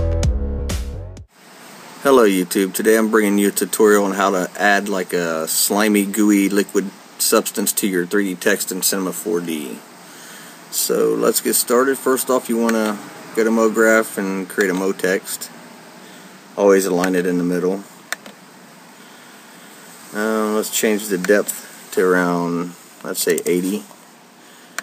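Nothing in the recording stood out as a technical problem on listening.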